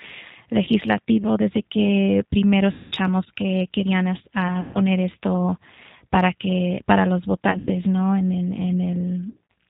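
G.729 coding, throughout: the 8 kbit/s codec rebuilds the speech from a vocal tract filter and sparse pulses, so nothing above 4 kHz survives and the voice sounds rough and synthetic. VoIP packet loss concealed by the speech codec, at 0.65 to 0.69 s (20 ms lost), at 2.72 to 2.92 s after "desde que primero" (200 ms), at 4.61 to 4.79 s before "esto para que para" (140 ms), at 7.51 to 7.71 s after "para que para los" (100 ms scattered over 160 ms), and at 9.30 to 9.36 s (140 ms scattered over 200 ms): the decoder fills each gap by stretching its last pitch and filter into a buzzy tone or coloured noise that fades, and the voice stays weak briefly after audio returns.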